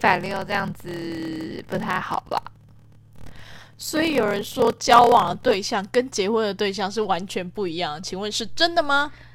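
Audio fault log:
0.00–5.55 s, block size mismatch (padded): the speech carries a 38.3 Hz buzz and runs at 0.889 times normal speed, pitch roughly unchanged. Blocks fitting 1024 samples are written into longer reads, so zeros pad each one, leaving a gap per block.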